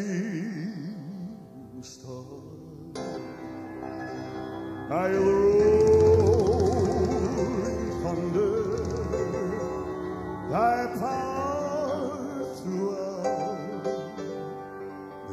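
Two brief glitches at 3.16 s and 14.79 s come from damaged data in a compressed stream: corrupted frames break decoder sync, producing short blips before decoding resumes.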